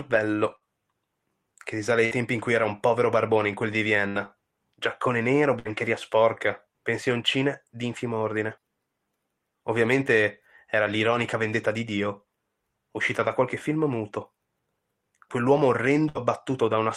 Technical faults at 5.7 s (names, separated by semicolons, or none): burst of packet loss